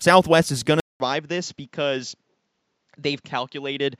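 After "is going", at 0.8 s, the sound drops out for 0.2 s and returns duller and somewhat quieter, with nothing above 7.6 kHz and a faint new background noise, lasting to the end. The likely cause is an input switched to a poorer device mid-recording.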